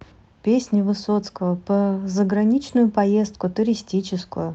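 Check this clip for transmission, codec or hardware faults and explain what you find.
No transmission, codec or hardware faults turn up anywhere in this speech clip. It has passed through a WebRTC call path whose codec, consistent with Opus, rolls the top end off at about 8 kHz, and that band limit is the expected behaviour of the call path.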